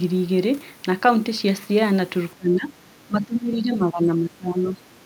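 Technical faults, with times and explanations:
2.35–4.8 s, speech suppressed in double talk: the speech dips by up to about 15 dB in broken patches totalling about two seconds, likely an echo canceller treating it as loudspeaker echo during far-side talk. Unlike a network dropout, it ducks rather than cutting cleanly to silence.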